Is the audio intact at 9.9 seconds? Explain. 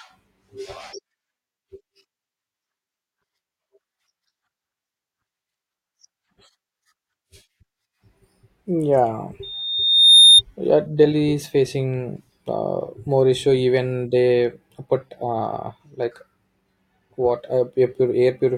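No. At 9.9 seconds a loudspeaker feedback squeal is sounding, from 9.43 to 10.42 s. The microphone is picking up its own loudspeaker, and the loop runs away at 3.6 kHz. The tone swells over most of a second to about 10 dB above the speech.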